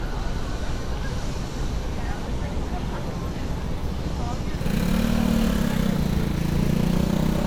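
Everyday sound with generation loss throughout: swirly, hollow, with blurred attacks, likely from about seven WMA passes at 128 kbit/s. A spectrogram shows speckled holes and nothing above 20.1 kHz.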